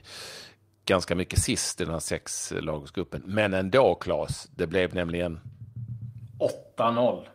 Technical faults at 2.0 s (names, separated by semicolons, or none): none